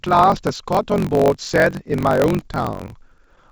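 From start to end the speech carries a block size mismatch (truncated). Each block loses its tail, giving a steady 46.9 Hz buzz, which fits 1024-sample reads, and the talk runs 1.12 times fast. Unlike a sample-rate error, pitch stays about normal.

From 2.47 to 3.46 s come repeated stalls (stutter): 12 short waits, the longest 13 ms, each filled by stretching the last sound, about 114 ms in all. Nothing is actually missing, which separates this drag from packet-loss dropouts. Above 8 kHz the G.722 call path leaves nothing.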